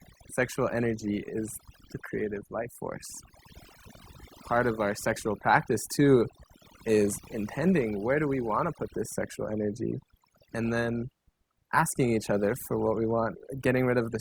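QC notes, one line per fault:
Throughout: overdone noise removal. A noise reduction stage set too aggressively mutes individual frequency bands whenever they sit near its noise estimate, taking quieter parts of the speech along. Pauses drop in level and break up into twinkling specks. On a spectrogram, background regions appear black with isolated bright dots, and speech harmonics look patchy and broken.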